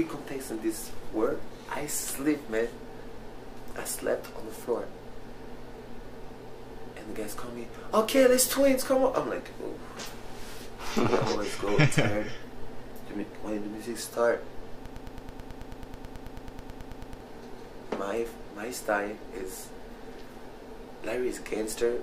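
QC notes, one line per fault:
14.86–17.20 s, broken-record loop. A 108 ms fragment repeats exactly, back to back, 22 times, giving a rapid mechanical stutter. The likely cause is a stalled player, encoder or stream resending the last piece it held. The audio for that span is lost.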